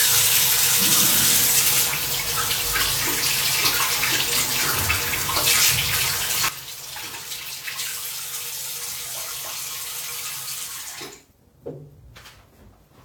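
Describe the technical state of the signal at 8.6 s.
At 8.6 s the signal sits inside a sudden gain jump that begins at 6.49 s and holds to the end of the clip. The level fell by about 12 dB in a single sample step, likely a gain setting applied without a ramp, so sound and background noise dropped together.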